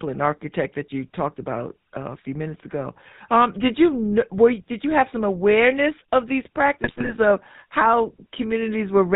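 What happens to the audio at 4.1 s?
At 4.1 s the speech sounds buzzy and gravelly, with a plainly audible roughness and nothing above 4 kHz. This is GSM full-rate codec damage, present through the whole clip rather than at that moment alone. The codec models the vocal tract and drives it with a coarse, regularly spaced pulse excitation that keeps only every third sample, so fine detail is lost. The damage fits a stream of about 13 kbps.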